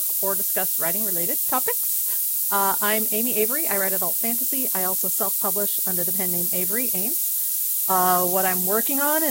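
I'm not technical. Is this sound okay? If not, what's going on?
No, it isn't quite right. The speech is stored with low bit depth, just 3 bits, using noise shaping: the rounding errors get pushed toward the high end. You hear a steady, thin hiss that gets brighter toward the top, quite loud against the voice, the whole way through.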